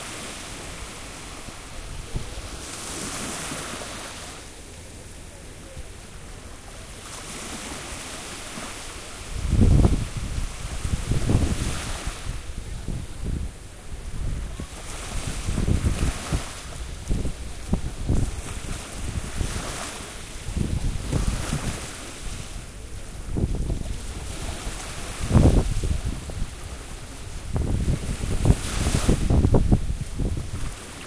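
Nothing stood out on listening to this recording of sounds.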